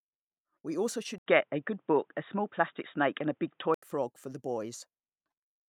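At 1.18 s the speech drops out for about 80 ms, then returns dull and boxy, with nothing above 3.8 kHz, a modest level shift and faint new background noise, until it clears at 3.82 s. This is likely an input switched to a poorer device.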